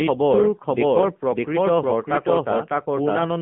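A speech clip carrying two faults from start to finish. The first is a doubled audio track: a second full-band copy of the speech runs roughly 0.7 s behind the first, at about the same level. Because it has no decay or room colouring, it is not an echo. Each phrase simply restarts on top of itself. The likely cause is the signal being captured a second time through a slower path, or an edit holding two copies out of step. The second fault is AMR narrowband mobile codec coding. The speech occupies only about 150 Hz to 3.4 kHz, with nothing above 3.5 kHz, which matches a telephone line band. Plainly audible codec damage gives the voice a buzzy, synthetic edge. This comes from the codec rebuilding speech from a vocal-tract model and a few excitation pulses per subframe, and the degree of damage fits AMR-NB running at a low mode around 7.4 kbps.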